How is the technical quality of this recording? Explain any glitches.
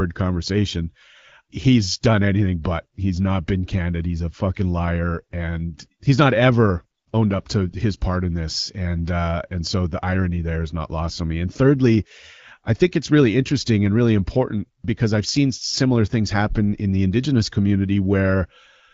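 The technical quality of this speech recording holds up, and there are no glitches to explain.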